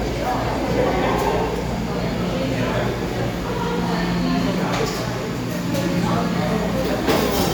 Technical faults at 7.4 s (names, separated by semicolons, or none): none